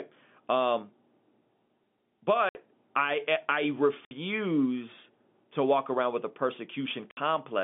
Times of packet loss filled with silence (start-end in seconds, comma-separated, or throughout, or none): 2.49-2.55, 4.05-4.11, 7.11-7.17